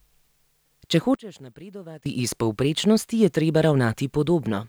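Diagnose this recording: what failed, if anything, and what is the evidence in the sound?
From 1.15 to 2.06 s the speech collapses by about 21 dB to a faint residue, likely one channel inverted in the analogue wiring, cancelling in mono.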